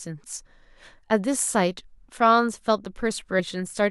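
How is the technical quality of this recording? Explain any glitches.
The recording has two brief dropouts where the speech jumps forward.

Compressed frames skipped, at 1.10 s and again from 3.39 to 3.41 s. A run of compressed frames was never played, either because they were missing from the stream or because the decoder rejected them as damaged. The first jump loses only a sliver of sound, roughly 15 ms; the second loses more, around 70 ms, which points to several frames dropped.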